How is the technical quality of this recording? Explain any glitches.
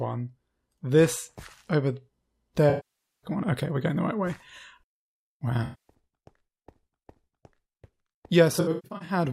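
The recording has three dropouts from AAC frame loss with concealment. At 2.69–3.30 s the sound smears and thins, sagging toward silence before fading back. A shorter phasey, noisy patch sits at 5.64–5.94 s. From 8.52 to 9.13 s brief gaps scatter, the longest around 150 ms. In each, the decoder lost blocks of data (about 0.53 s, 0.23 s and 0.36 s in total) and rebuilt them from the last good spectrum, fading out where losses persisted.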